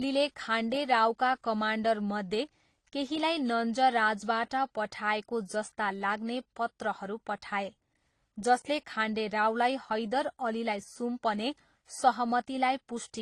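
Throughout, the speech carries two layers of smeary, swirly artefacts and has nothing above 12 kHz. This is likely transcoding between lossy codecs, with an AAC encode re-encoded through Opus.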